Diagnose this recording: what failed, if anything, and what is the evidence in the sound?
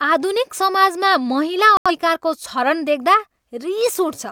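The speech drops out on the reception side with a digital broadcast dropout from 1.77 to 1.91 s. The audio mutes and then resumes further into the programme. The receiver likely rejected a couple of corrupted frames and silenced output until clean data returned, so roughly 85 ms of material never arrived.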